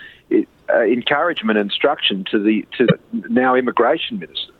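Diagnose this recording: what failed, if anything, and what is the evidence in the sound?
The failure is in the codec stage: damaged data in a compressed stream. There's a short glitch at 0.54 to 0.56 s and a longer one at 2.84 to 2.92 s. Corrupted bytes threw the decoder off its frame boundaries, so it decoded junk until it locked onto the next valid frame header.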